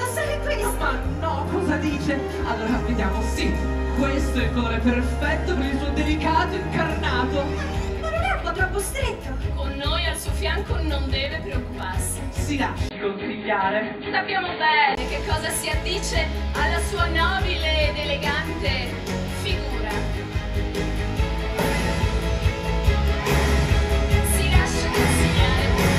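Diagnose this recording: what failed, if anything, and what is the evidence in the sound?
Between 12.89 and 14.97 s the spectrogram's upper band vanishes above 4.6 kHz after a 20 ms waveform gap. This is likely an input switched to a poorer device at the driver stage.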